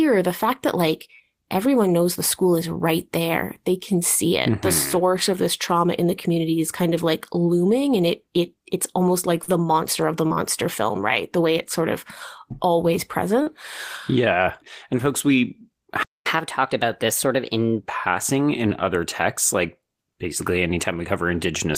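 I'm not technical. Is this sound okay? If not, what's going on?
No. Four times, at 1.15, 9.44, 10.27 and 13.42 seconds (the last right after "it's sort of always"), there was short concealed packet loss: about 40 milliseconds of the call arrived too late, and the receiver filled the gap by stretching the sound just before it. You hear a quick smear or wobble.

At 16.03 seconds, just after "and folks we", there's a playback stall. The speech cuts to silence for about a quarter of a second, likely because the player ran out of incoming audio or was briefly held up, and then it resumes.

From 16.26 to 17.80 seconds the player does catch-up at higher speed, running its backlog about 1.15 times faster to regain the lost time. The speech sounds hurried and roughly two semitones higher, then settles back to normal around "passing in other texts".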